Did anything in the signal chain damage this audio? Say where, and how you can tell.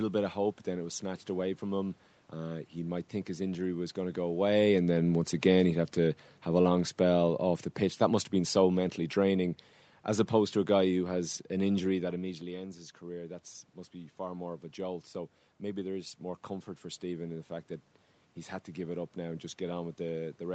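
Yes. The automatic gain falling happens in the call processing stage, between 4.28 and 7.40 s. Having judged the input too loud or its background noise too strong, the gain control eases its gain down by about 4 dB over those three seconds. On a waveform the envelope shrinks steadily rather than in one step, and a spectrogram shows the room noise floor dimming together with the speech, which is how it differs from the talker shifting position around 4.5 s.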